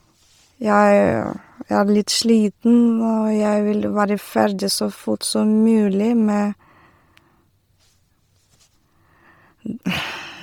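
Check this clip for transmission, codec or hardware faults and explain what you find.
Heavy codec damage runs through the whole speech recording, most likely from Bluetooth LC3 compression. Upper frequencies are coarsely replaced with noise fill in 10 ms frames, giving a breathy, grainy edge, which fits roughly 32 kbps. Content reaches 20.3 kHz, so it is not simple band-limiting.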